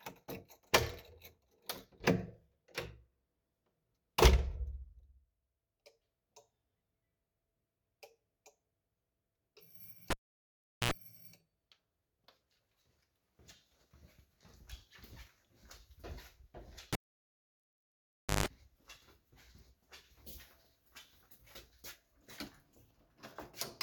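A recording of sounds, interrupted twice by a cable pulled and plugged in, at 10.10 to 10.91 s and 16.93 to 18.46 s. Each starts with a pop as the live connection breaks and drops to near silence for about 0.76 s and 1.48 s respectively. Then, as the plug tip touches before seating, mains hum bursts through, 71 ms at 60 Hz and 147 ms at 50 Hz, before a second pop restores the signal.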